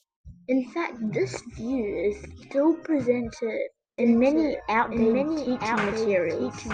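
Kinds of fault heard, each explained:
Doubled audio track: From about 3.98 s to the end, a second copy of the speech runs underneath the first, trailing it by roughly a second and sitting somewhat quieter. The copy is dry and full-band, with no room tail, and it cuts in abruptly rather than fading up. This likely comes from the same signal being captured again through a slower path, or an edit leaving two out-of-step copies mixed together.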